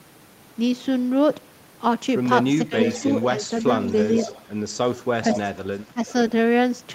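At 2.65 to 2.74 s the voice dips by roughly 15 dB for a brief moment, and again from 3.3 to 3.85 s by around 10 dB over a few tenths of a second, then at 5.88 to 6.01 s by about 15 dB. This is likely speech suppressed in double talk, where an echo canceller, unable to tell the near talker from loudspeaker echo, turned both down. On a waveform the envelope sags abruptly in those spans. Interleaved with these, echo leak appears at 2.82 to 3.25 s, 3.87 to 4.43 s, 5.32 to 5.39 s and 5.75 to 6.13 s. A copy of the voice returns about 0.48 s late, most likely because the far end's canceller let part of its loudspeaker pickup through. It sits about 10 dB below the speech at its strongest and falls to about 25 dB below at its weakest. A spectrogram shows ghost harmonic traces trailing the originals by that fixed offset.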